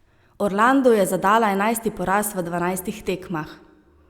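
Nothing in the speech stood out as a technical fault on listening.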